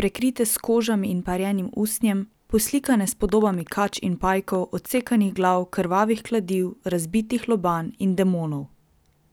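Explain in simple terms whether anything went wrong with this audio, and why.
A train of clicks runs from 3.29 to 5.43 s, between "usnjem poslikane s" and "glav krvavih kladiv razbitih": roughly fifteen similar pops, about 7.5 per second at an uneven pace, as loud as the speech. The repeated, matching shape sets it apart from random crackle. Interference is the likely cause.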